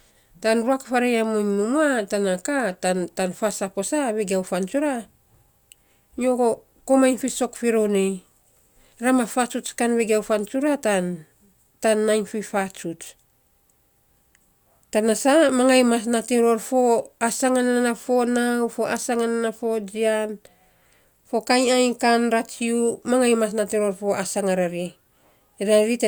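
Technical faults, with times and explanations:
No technical faults are heard in this speech clip.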